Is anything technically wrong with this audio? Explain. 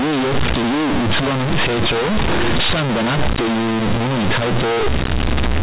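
Yes. Throughout the clip, the speech suffers from companded audio read as linear. The mu-law bytes are played as plain 8-bit samples with no expansion. Every sign change jumps across half the output range. Quiet and loud parts come out equally large. The result is very loud, buzzy distortion with heavy noise in the pauses.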